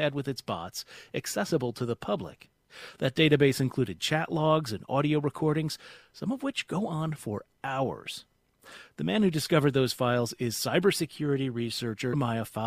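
Right near the end, at about 12.12 s, there's a brief blip lasting under 20 ms. That's damaged data in a compressed stream: a stretch of the encoded bytes got corrupted, so the decoder couldn't make sense of the frame sitting there. It lost the proper audio there, then found its footing again at the next clean frame header, which is why the glitch comes and goes so quickly.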